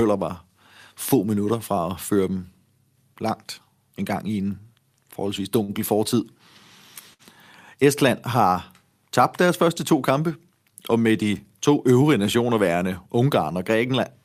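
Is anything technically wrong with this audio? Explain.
Yes, there are two kinds of playback fault.

At 5.63 to 5.71 s and again at 7.13 to 7.22 s, the speech briefly hangs, with a sound held too long and a faint buzz or dip. These are short stalls from a late packet: the jitter buffer ran dry, and the receiver stretched the last sound by 50 ms and 59 ms until the packet arrived. Nothing is lost, but playback ends up later each time.

From 11.77 to 12.10 s the speech sounds hurried but keeps its pitch. This is a jitter buffer speed-up: to shed the extra delay the buffer had built up, the receiver cut short pieces of one or a few pitch periods each, running at 110% speed and dropping roughly 40 ms in total.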